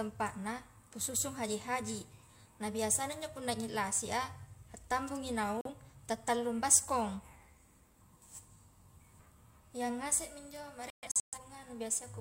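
A digital broadcast dropout, where the receiver lost valid frames and muted, causes brief silence in the speech at 5.61–5.70 s, about 43 ms, fitting one lost frame. At 10.90–11.38 s, roughly 0.3 s vanishes in several short holes, the longest 128 ms.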